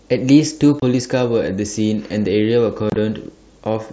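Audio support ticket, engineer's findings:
Unconcealed Bluetooth headset packet loss: abrupt dropouts at 0.80–0.82 s and scattered across 2.90–2.96 s, likely headset radio link. Waveform shows flat gaps with hard edges; spectrogram shows full-height vertical blank slices over the 8 kHz-limited mSBC band.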